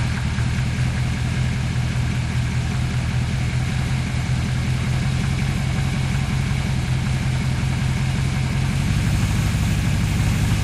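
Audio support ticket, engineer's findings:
No faults found in this recording of sounds. No component flagged and no follow-up needed on this ticket.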